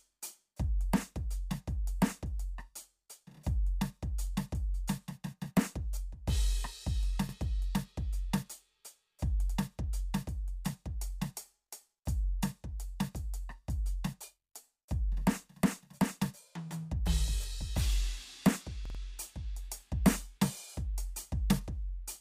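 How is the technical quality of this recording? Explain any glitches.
The music has two stutters from a repeated buffer, at 7.29 s and 18.86 s. Fresh audio arrived late, so the same roughly 46 ms slice, which fits a 2048-sample buffer, replayed with hard joins: twice at 7.29 s, four times through 18.99 s. No music is skipped.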